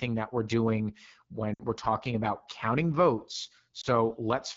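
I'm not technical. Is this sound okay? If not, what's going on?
No. The call used the AMR wideband (HD Voice) codec at one of its lowest settings, so the speech sounds rough and raspy throughout. There are also lost AMR speech frames: radio errors spoiled short chunks of the speech, and the phone filled each gap by briefly repeating the last sound at fading volume. You can hear this as a dip to near silence from 1.54 to 1.62 s and a brief warble from 3.81 to 3.87 s.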